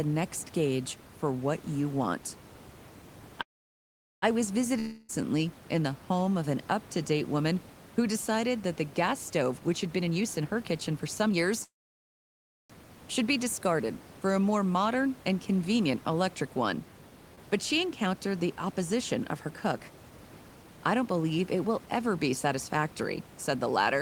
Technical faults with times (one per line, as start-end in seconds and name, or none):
3.41-4.24 call audio freeze
4.79-5.22 long network dropout
9.41-11.53 jitter buffer speed-up
11.64-12.71 call audio freeze
17.35-17.39 skip ahead
18.06-22.56 jitter buffer speed-up